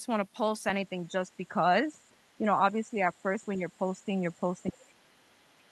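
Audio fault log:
1.03–1.48 s, 2.04–2.36 s, 2.97 s to the end: other side's voice leaking through. A faint second voice sits far beneath the main speech, roughly 35 to 40 dB down, in short scraps and then a long final stretch. The likely cause is loudspeaker playback the echo canceller failed to fully remove from the microphone.
1.12 s to the end: speech suppressed in double talk. The main voice repeatedly dips, at its deepest by around 25 dB, while the other side's sound is present. Likely the echo canceller, unable to separate talker from echo during overlap, turned both down together.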